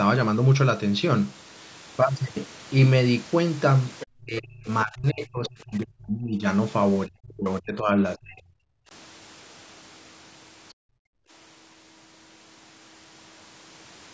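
Speech recorded through a call's microphone processing, which passes nothing above 8 kHz, carries echo-canceller faults at four points. From 4.0 to 4.06 s the likely cause is a loudspeaker echo the canceller failed to remove, so the other side's voice is leaking through. A brief scrap of a second voice sits underneath, roughly 15 dB below the talker. It is too short to be more than a flicker.

Right after that, from 4.1 to 6.45 s and again from 7.06 to 8.65 s, the speech is suppressed in double talk. Both ends were talking at once, and the canceller likely could not separate the near talker from the echo, so it pulled the microphone down along with it. The voice sinks by as much as around 35 dB. About two seconds are affected in the first stretch and about a second and a half in the second.

From 10.73 to 11.3 s the background is gated by the echo canceller. While the loudspeaker played, the canceller clamped the microphone hard, so the room sound drops by about 40 dB for roughly half a second. 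The room sound then comes straight back once the suppression releases.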